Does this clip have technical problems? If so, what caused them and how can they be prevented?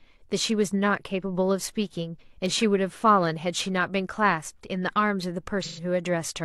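Yes. AAC frame loss with concealment occurs from 5.63 to 5.83 s, where the speech gives way to a smeared, noisy patch. About 128 ms of coded audio, which fits three missing frames, never reached the decoder, so it filled the gap by reusing the last good spectrum with altered phase and energy rather than leaving silence. To prevent this, carry the stream over a link with retransmission or forward error correction so frames arrive intact.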